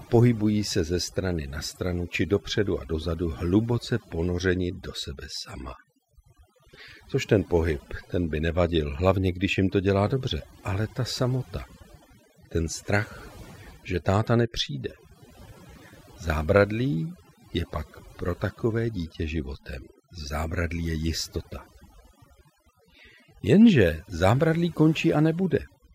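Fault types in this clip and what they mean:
overdone noise removal: A noise reduction stage was pushed too hard on this speech. Any frequency band that sits near the tool's noise estimate gets cut deeply or shut off, and softer parts of the voice get cut with it. Throughout the clip the background drops and breaks up into twinkling specks. On a spectrogram, pauses show as dark gaps scattered with isolated bright dots, and harmonics look patchy and ragged at the edges.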